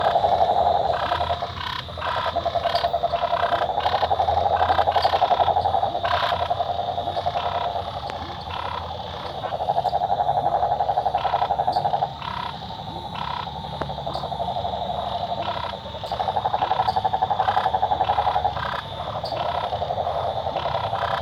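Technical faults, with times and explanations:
8.10–8.12 s and 13.82–13.84 s, loud pop: two single sharp pops, each about 20 ms long, jumping roughly 15 dB above the surrounding level while the sound carries on underneath. A brief spike like that most likely comes from a voltage step or pulse, such as a switch, a connector being touched, static or a driver glitch, getting into the chain. The circuits that follow shape it into a short sharp pop.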